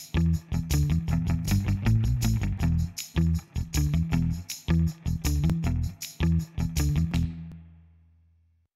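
The audio was handled in 2-second chunks that overlap, so each new chunk starts before the previous one has finished and replays its last 20 ms. These overlapping chunks produce a short doubled fragment at every join, at 1.46–1.48, 3.48–3.50, 5.50–5.52 and 7.52–7.54 s. Each one is heard as a brief click or stutter. Because the joins fall about every two seconds, the glitches form a steady, regular pattern through the sound.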